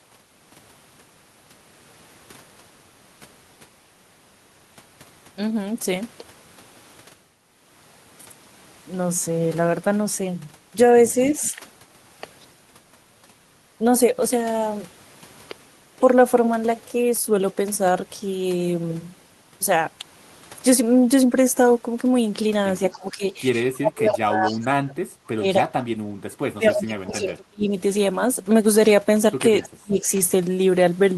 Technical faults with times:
11.39-11.62 speech suppressed in double talk
11.44-11.49 echo leak
22.92-22.98 echo leak
22.93-23.24 speech suppressed in double talk
23.52-27.73 speech suppressed in double talk
27.11-27.15 echo leak
29.61-29.69 echo leak
29.62-30.07 speech suppressed in double talk

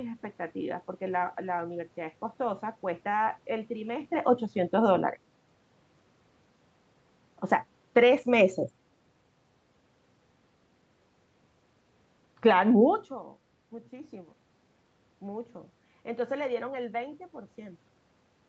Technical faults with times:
7.81-8.15 automatic gain falling

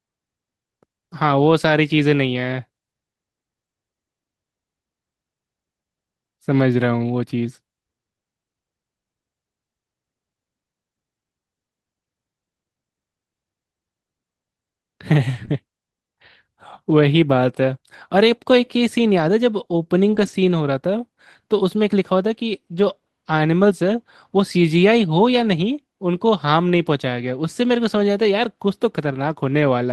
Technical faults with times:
15.45-15.49 short concealed packet loss
15.47 lost packet rebuilt from error correction
20.15-20.33 lost packet rebuilt from error correction

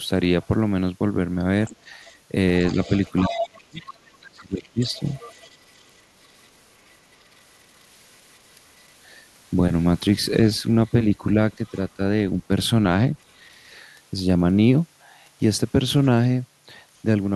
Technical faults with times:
0.43-0.47 other side's voice leaking through
1.66-7.16 other side's voice leaking through
2.75-5.00 speech suppressed in double talk
10.86-11.78 other side's voice leaking through
11.97-12.49 speech suppressed in double talk
13.28-13.38 other side's voice leaking through

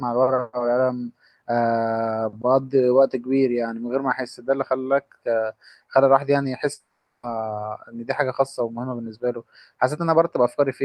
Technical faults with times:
6.73-7.25 long network dropout

